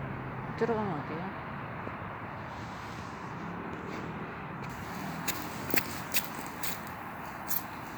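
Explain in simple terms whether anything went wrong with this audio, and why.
From 4.70 s to the end, the sound turns thin, bright and hissy. This is pre-emphasis left on. FM radio boosts the treble before sending, and the receiver is meant to cut it back by the same amount. Here the cut never happened. What sets it apart from simple added hiss or a crackly fault is that the sound itself is reshaped: the edge climbs steadily from the upper-middle range upward, following the standard FM curve.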